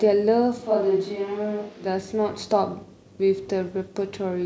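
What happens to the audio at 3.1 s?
At 3.1 s the speech plays through intact, with no dropout, click, distortion or other disturbance at that point.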